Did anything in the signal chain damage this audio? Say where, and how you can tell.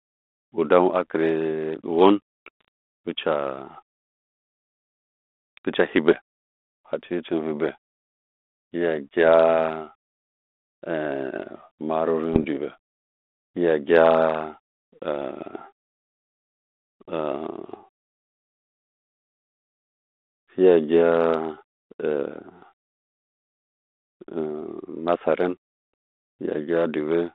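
Yes. The damage happened on the transmission link carrying the G.726 ADPCM stream, and it shows up as bit errors on an ADPCM link at 2.61–2.68 s and 12.33–12.44 s. Each event is pops and a rough, gritty burst with a brief change in level, lasting about 75 ms and 110 ms. A flipped bit corrupts the decoder's step size and predictor, so the error keeps ringing until adaptation recovers. The error rate sounds low, under one percent, against the 250 Hz–3.6 kHz band of the 32 kbit/s coding.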